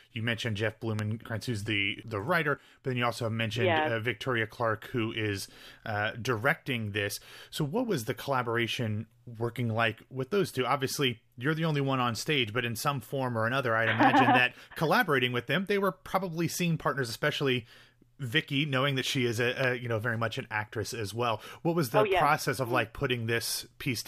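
Sharp single pops cut across the speech at 0.99 to 1.01 s, 14.03 to 14.05 s and 19.64 to 19.66 s, each roughly 15 dB above the speech, which continues underneath. These loud pops are likely voltage spikes, from a plug, switch, static or driver glitch, entering the signal chain.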